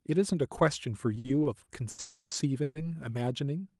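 From 1.15 to 2.00 s the speech drags and stutters, broken by six short held-over fragments, the longest about 80 ms, together roughly a quarter of that stretch. These are repeated stalls (stutter): packets arrived late, the jitter buffer kept emptying, and the receiver stretched the last sound each time, so nothing is lost.

Straight after, from 2.00 to 2.33 s, the sound hangs as a fading buzz for about 310 ms, dipping briefly to silence before resuming. A shorter hang of about 120 ms follows at 2.63 to 2.77 s. Both are call audio freezes, likely caused by packets held up in transit draining the buffer, with the Opus call path limiting bandwidth to roughly 12 kHz throughout.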